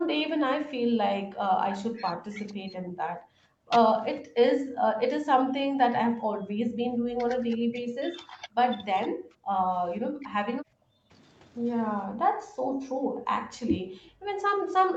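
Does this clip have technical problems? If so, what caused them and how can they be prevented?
Yes. Speech suppressed in double talk occurs from 0.0 to 3.7 s, 4.22 to 8.6 s, 9.08 to 9.74 s, 9.97 to 11.13 s and 12.07 s to the end. The speech drops by up to about 40 dB, likely because the echo canceller attenuated the near talker while the far side was speaking. Headsets or an echo canceller with better double-talk detection would prevent this.

An echo leak appears from 2.49 to 2.54 s. It is a very faint scrap, about 35 dB below the speech, delayed by 473 ms. The likely cause is a far-end loudspeaker whose echo canceller let residual pickup through. Lowering the speaker volume or using a headset there would prevent it.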